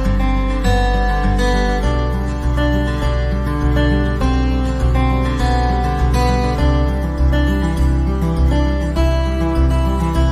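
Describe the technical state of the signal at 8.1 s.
At 8.1 s the signal is intact, with no audible dropout, distortion, glitch or other technical fault at that point.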